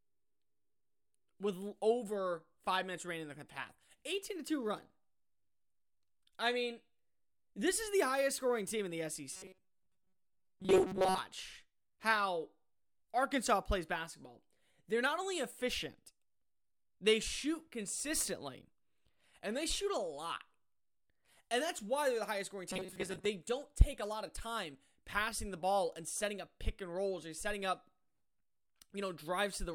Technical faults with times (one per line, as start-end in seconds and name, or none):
9.32-11.18 robotic sound from repeated short buffers
22.70-23.25 robotic sound from repeated short buffers